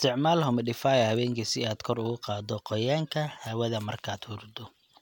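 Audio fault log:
No faults heard anywhere in this speech recording.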